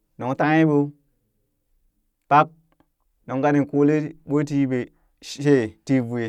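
Listening to this speech recording, nothing stood out as a technical problem at any point.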